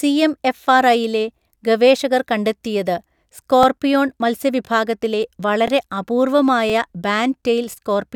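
A short click-like stutter recurs about once per second, at 0.57–0.59, 1.59–1.61, 2.61–2.63, 3.63–3.65, 4.65–4.68, 5.68–5.70, 6.70–6.72 and 7.72–7.74 s. These are overlapping chunks. The speech was handled in 1.0 s blocks, and each new block begins about 21 ms before the previous one ended. That sliver of speech plays twice at every join, producing the regular hiccup.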